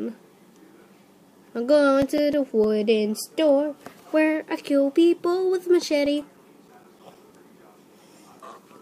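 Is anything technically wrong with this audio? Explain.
Yes, two runs of CD scratch ticks. A blemish on the disc corrupts more data on each revolution than error correction can rebuild, so the player conceals the damaged samples by interpolating or muting them. From 1.56 to 2.80 s this produces nine short ticks, and from 5.91 to 7.76 s thirteen more. Both runs tick at about seven per second, the disc's rotation rate. Each tick is a tiny click or gap lasting just a few milliseconds.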